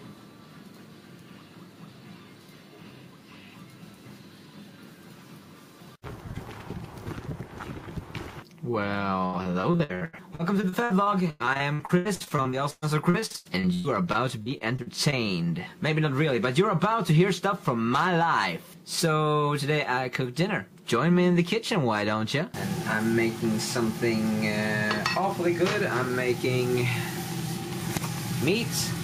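Repeated packet loss runs from 9.25 to 15.14 s: packets keep arriving late or not at all, and each hole is patched by extending the preceding sound. Dozens of short gaps, the longest about 115 ms, leave roughly 28 percent of that stretch concealed, so the audio turns choppy and robotic with fragments missing.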